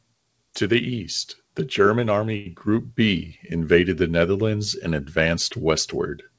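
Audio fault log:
2.37 to 2.47 s, short stall from a late packet: the jitter buffer ran dry waiting for a late packet, so the preceding sound is held for 89 ms. Nothing is lost, and everything after plays 89 ms later.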